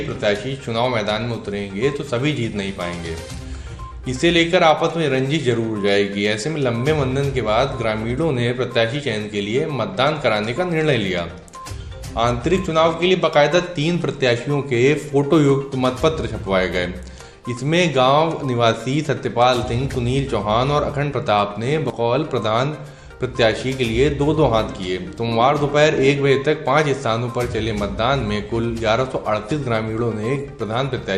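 Throughout the audio the likely cause is heavy MP2 compression at a low bitrate, which fits something around 80 kbps: with too few bits to share among its 32 sub-bands, the encoder drops the upper bands and quantises the rest coarsely. The result is plainly audible, a dull top end with a gurgling, granular texture as bands flicker in and out. On top of that there is DAB burbling, where reception errors at a small fraction of a percent slip past error correction and corrupt samples and scale factors, so individual sub-bands briefly jump in level. This is heard as short blips of noise in single sub-bands spread over several frames, once from 19.90 to 19.95 s and again briefly at 30.50 s.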